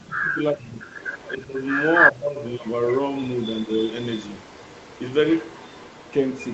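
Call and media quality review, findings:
Speech suppressed in double talk at 0.0–0.87 s, 1.36–1.64 s and 2.11–2.48 s. Talker level dips and breaks up, deepest about 30 dB early, about 20 dB later. Likely echo canceller ducking both talker and echo when both sides spoke.

Echo leak at 0.45–0.49 s, 0.8–1.44 s, 1.93–2.11 s and 2.54 s to end. Delayed copy of the voice, 379 ms behind first, then 263 ms. Mostly about 15 to 25 dB down, but about 10 dB above speech at 1.93 s. Likely incomplete cancellation on a loudspeaker end.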